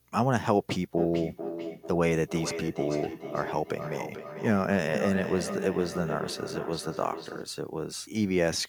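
A second device in the same room is replaying the call into a microphone whose echo canceller cannot remove it, causing feedback echo between two devices from 0.97 to 7.6 s. The speech returns roughly every 0.4 seconds, peaking about 8 dB below the direct speech.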